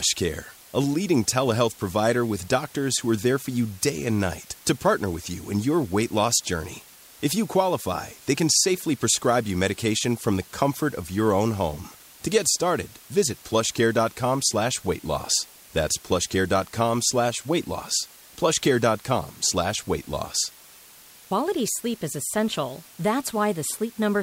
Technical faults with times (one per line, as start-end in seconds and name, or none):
0.00-24.23 low bit depth with dither